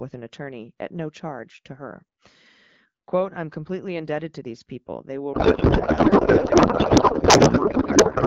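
From 5.33 s to the end of the clip, the speech gives way to garbled noise and warble that barely tracks it. This is a codec payload misread: octet-aligned AMR frames were decoded as bandwidth-efficient, so every field landed in the wrong bit positions. Before that point the AMR wideband (HD Voice) codec sounds clear, which fits a rate of about 12.65 kbit/s.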